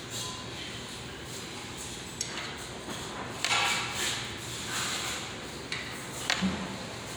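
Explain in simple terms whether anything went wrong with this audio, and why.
Nothing went wrong here; these sounds come through just as they should, with no glitches, dropouts or odd noises to point to.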